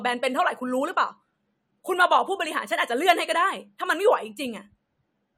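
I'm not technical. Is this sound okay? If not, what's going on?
Yes, no problems heard.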